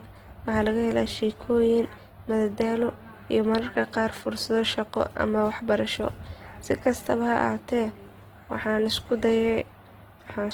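Throughout the speech, plainly audible Opus compression damage is present, likely from a music-mode (CELT) encode at a rate near 16 kbps. Starved bands are filled with folded or noise-like content, so tones turn grainy and rough. Bandwidth stays full, reaching 20.2 kHz.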